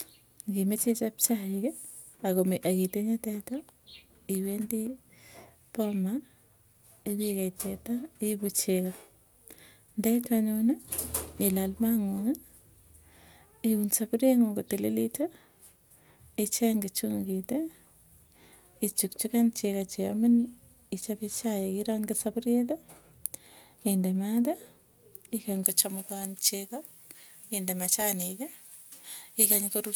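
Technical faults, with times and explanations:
25.63 to 29.96 s, pre-emphasis left on: for the last few seconds the speech turns thin, bright and sibilant, with the treble standing out at about 11 dB above 1 kHz by 10 kHz, a lift whose shape fits a J.17 emphasis curve. The high frequencies were boosted for recording or transmission, and the matching de-emphasis that should have cut them back by the same amount was never applied, so the lift remains.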